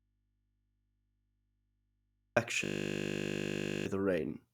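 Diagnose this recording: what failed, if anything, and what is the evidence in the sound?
From the very start until 2.37 s the speech is absent, leaving only mains hum far below, about 50 dB under the signal. This is an audio dropout to a faint residue, likely a break in the analogue wiring ahead of a still-live input stage.

From 2.64 to 3.86 s a steady 50 Hz buzz replaces the speech: a 20 ms fragment repeats exactly, about a second of audio lost. This is a system hang loop, the driver frozen while the hardware kept recycling a 20 ms ring buffer.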